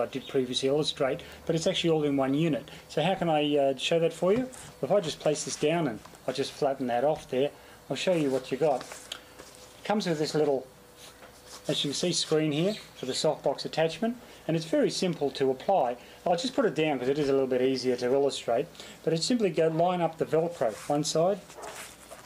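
Bit error spikes occur at 1.32 s and 15.81 s. Each is a single corrupted sample, peaking at about -25 and -31 dBFS, heard as one brief, broadband tick.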